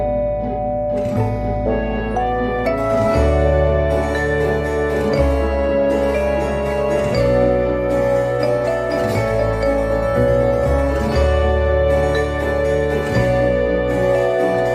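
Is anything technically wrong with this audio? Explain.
No, nothing technically wrong can be heard in this audio. There are no audible faults anywhere in it.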